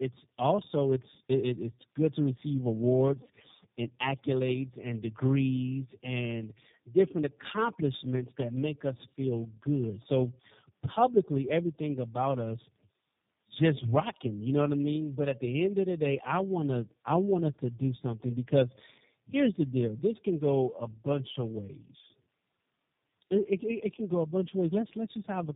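Throughout, tandem speech coding: three chained speech coders each re-code the last one's damage, compounding warble and muffling beyond any single codec's, with nothing above 3.7 kHz.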